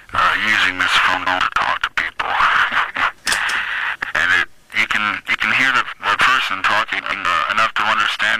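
At 1.14 to 1.40 s, 3.95 to 4.13 s and 7.0 to 7.25 s, frames out of order swap two adjacent blocks, flipping a short stretch into garbled flutter, unlike a dropout, since nothing goes missing. From 5.69 to 6.74 s, CD scratch ticks hit seven times at a steady rotational rate, each only milliseconds long, which sets them apart from random clicks.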